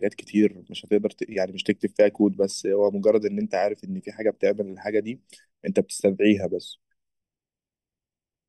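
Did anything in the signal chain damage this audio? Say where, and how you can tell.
Yes: channel delay (comb filtering) at the mono sum. One channel lags about 0.4 ms, notching near 1.5 kHz and upward, so the speech sounds hollow throughout.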